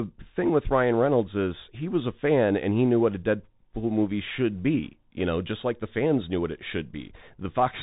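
Throughout the clip the speech has passed through a Bluetooth CVSD headset codec, the narrowband link a headset falls back to. It codes each sample as a single up-or-down bit with an adapting step, at a rate that fits 64 kbps. Nothing above 3.8 kHz survives, so the speech sounds boxed-in and phone-like. Loud, bright sounds outrun the step and distort, s sounds turn scratchy, and a grainy hiss sits plainly beneath the speech.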